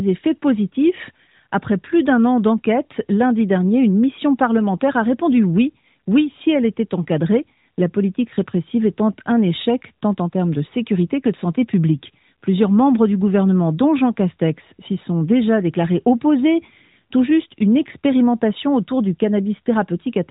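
Listening to the speech here, nothing stood out as a technical problem at any point.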